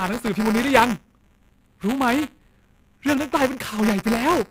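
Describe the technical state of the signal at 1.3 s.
Buffer tearing is present at 1.3 s and runs through the whole clip. The software filling the ring buffer and the hardware draining it have drifted out of step, so their positions cross within every period. A small slice of each buffer, around a twentieth, still holds speech from roughly 15 ms earlier, with abrupt joins at both edges. The result is a continuous robotic buzz at 200 Hz, which fits a 5 ms buffer period, riding on the speech wherever it sounds.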